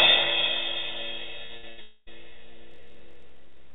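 At 1.46 s a short concealed packet loss occurs: about 20 ms of the stream never reached the decoder, and the receiver bridged it by extending the preceding sound for roughly 28 ms before blending back. The result is a brief smear or wobble in the audio.

Two bursts of packet loss follow, at 1.57 to 1.65 s and 1.69 to 1.79 s. Each time several packets in a row went missing, about 60 ms and then 80 ms of audio. The receiver stretched the last sound and turned it down, so each gap is heard as a held, fading buzz or hiss, and the audio resumes with that stretch gone.

From 1.81 to 2.09 s a fading buzz or hiss lasts about a quarter of a second and ends in roughly 20 ms of silence before the sound returns further on. This is likely a long network dropout, with around 260 ms of audio never played.

From 2.69 s to the end, a block size mismatch (truncated) sets in. One stage writes longer blocks than the next reads, so the tail of each block is discarded. 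This produces a steady buzz at 43.1 Hz, which fits a 1024-sample read, and the audio runs about 1.12 times fast at close to its normal pitch.

Throughout, nothing is present above 4 kHz, which fits the narrowband G.711 call path at 64 kbps.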